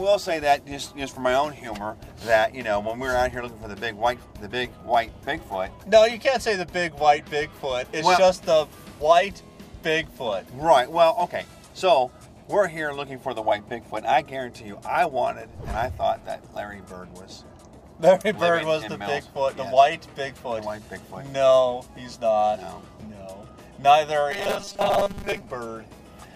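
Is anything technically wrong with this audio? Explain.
Yes. From 24.31 to 25.41 s the sound turns into a rigid, metallic buzz pitched at 200 Hz, still loosely tracing the original contour. This is robotic sound from repeated short buffers, likely because fresh audio arrived too seldom and playback kept looping the last fragment. A 200 Hz buzz fits a repeat about 5 ms long, and the looping fills most of that stretch while the real audio is skipped.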